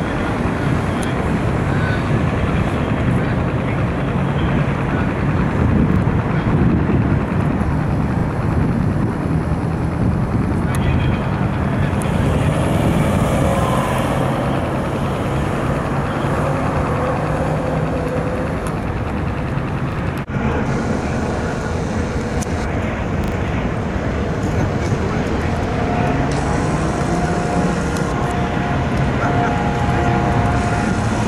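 A repeated buffer stutters through this audio at 5.92, 8.2 and 19.92 s, each a 40 ms slice played twice with a hard join. At 23.24 s the slice plays three times, running to 23.32 s. That's the device replaying its last block when fresh data was late, so a little audio is skipped each time.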